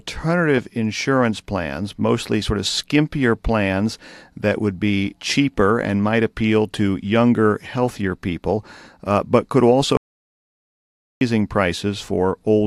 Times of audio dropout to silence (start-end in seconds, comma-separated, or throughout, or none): 9.97-11.21